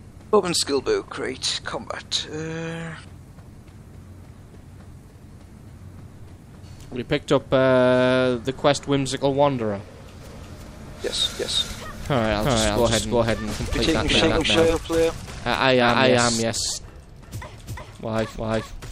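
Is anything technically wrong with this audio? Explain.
Yes. From 10.21 s to the end, there is a doubled audio track, likely because the same signal reaches the mix twice, once directly and once through a slower path or an edit that holds two copies out of step. The second copy trails by roughly 0.4 s at about the same level, full-band and dry, with no decay or room colour. It cuts in abruptly, so every event is followed by an identical repeat.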